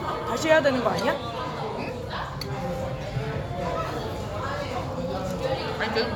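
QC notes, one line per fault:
No technical faults are present anywhere in the audio, which shows a continuous, intact signal path.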